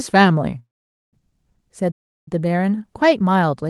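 A speech recording carried over a call path, with Opus-style coding and high frequencies rolled off around 12 kHz. From 0.59 to 1.15 s the last sound smears into a brief fading buzz, then falls silent for most of that half-second before the speech picks up exactly where it broke off. This is a call audio freeze, likely from packets held up in transit draining the jitter buffer. From 1.91 to 2.28 s the speech cuts out abruptly mid-flow for about 0.35 s and then carries on. This is a playback stall, likely caused by the player running short of data or its thread being blocked.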